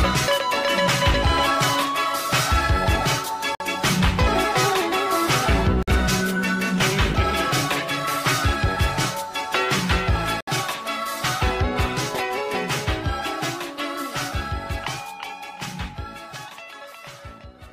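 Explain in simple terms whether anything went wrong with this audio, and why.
Brief silences at 3.55 s, 5.83 s and 10.41 s (about 50 to 70 ms) are a gap at a join of encoded pieces. Sound resumes exactly where it stopped, so nothing is lost, unlike a dropout.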